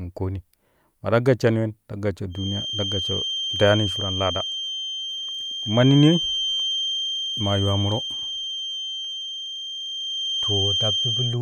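A feedback whistle enters at 2.28 s, just after "gashshani wen ta gashsho", and lasts to the end: a thin, steady 3.2 kHz tone sitting a little below the speech and wavering slightly, likely from a loudspeaker-to-microphone loop held just short of runaway feedback.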